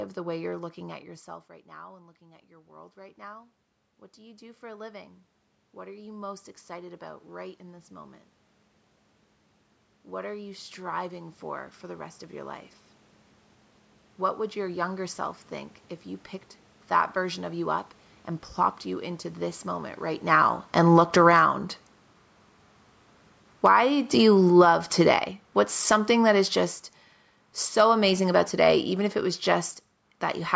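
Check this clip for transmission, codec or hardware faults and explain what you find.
The faults here are gain-control pumping, not codec or hardware damage. The level of the voice and the room noise behind it keeps drifting up and down as a whole over half a second to several seconds.

Automatic gain rising occurs four times: from 1.27 to 8.26 s, just after "way you're looking at"; from 10.07 to 12.67 s; from 21.37 to 21.86 s; and from 23.75 to 25.28 s. In each stretch the voice and its background swell together. The first rise is the longest and climbs about 12 dB. The later ones climb about 6 dB, about 8 dB and about 4 dB. The first follows a talker leaning away near 1 s, which dropped the input by about 19 dB. The automatic gain control heard a quiet signal and slowly turned its gain up to compensate, so the room noise is lifted along with the voice.

Automatic gain falling occurs from 20.18 to 22.07 s, right after "you into this moment", and again from 23.5 to 30.51 s. 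The sound starts loud and then sinks with its background, by about 4 dB and then by about 11 dB over the last seven seconds. The first fall comes as the talker moves near 20 s. The control judged the input too loud, or its background noise too strong, and eased its gain down gradually. Because brief upward corrections overlap both falls, the level seesaws between 20 and 25 s. The audio also carries nothing above 8 kHz, consistent with call microphone processing.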